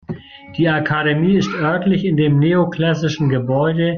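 No technical faults can be heard in this recording of speech.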